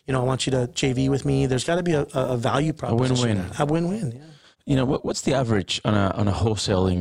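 From start to finish the speech carries a metallic buzz with extra tones around each note, riding on every syllable, with the level pulsing by about 6 dB at a rate of around 300 times a second. This is overlap-add ripple: the audio was split into windowed frames and reassembled with an overlap whose windows do not add up to a steady gain, so loudness swells and dips once per frame, matching that rate.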